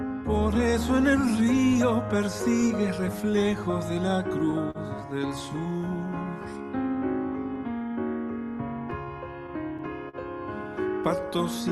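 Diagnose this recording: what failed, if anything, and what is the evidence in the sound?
Clock drift between sender and receiver, present from start to finish: this is a network and buffer-stage fault. The sending device's clock runs roughly 3 percent slow relative to the receiver's, so the jitter buffer keeps draining faster than it refills. The receiver has to keep compensating throughout. The result is an unsteady pacing that never settles, with small timing hiccups at irregular intervals across the whole clip.

Repeated timing corrections, from 0.09 s to 11.71 s: this is the buffer-stage response to that drift. Because the incoming audio arrives too slowly, the receiver repeatedly stretches short pieces rather than cutting them. Across the run this adds something like 150 ms in total, and playback sits at about 99 percent speed. Each edit is tiny and unevenly spaced. Together they give a faintly dragging, uneven tempo rather than any single obvious glitch.

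Scattered short gaps, from 3.72 s to 4.78 s and again from 8.91 s to 10.16 s: these are network-stage losses, with packets lost or arriving too late. In each stretch there are around four small holes, the longest about 40 ms. The receiver covered them by extending the preceding sound, which accounts for a small fraction of each span. They come through as brief smears and ticks in the audio, which otherwise stays clear through the Opus call codec. The codec's roughly 12 kHz upper limit fits a 32 kbps setting.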